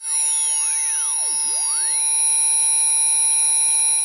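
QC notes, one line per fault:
No faults heard anywhere in these sounds.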